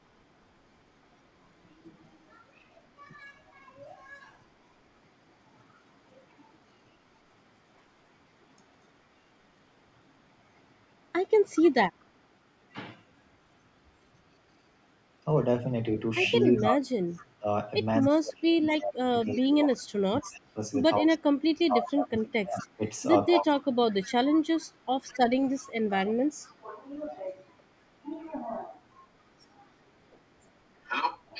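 An echo leak appears at 11.55 to 12.04 s, 18.05 to 20.26 s, 21.89 to 24.06 s and 25.13 to 26.55 s. A faint copy of the far talker returns 239 ms late, about 20 dB down, likely because a loudspeaker echo canceller let it through. Unlike reverberation, it is a distinct delayed repeat.

Speech suppressed in double talk spans 16.44 to 24.61 s, totalling around 5 s, and again 26.05 to 26.67 s. The near talker dips by as much as roughly 30 dB, likely because the canceller ducked both voices during overlap. Unlike a dropout, the loss tracks the other side's speech.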